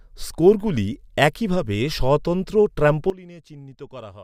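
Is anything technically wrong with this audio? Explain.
Yes. At 3.1 s, right after "স্কোরগুলি একইভাবে স্বতন্ত্র", there is a sudden gain jump: the level falls by about 19 dB in an instant and stays down to the end. The cause is likely a gain change applied without a ramp. Unlike a fade, there is no gradual slope, and unlike a dropout, the audio continues at the lower level, with the background noise falling along with it.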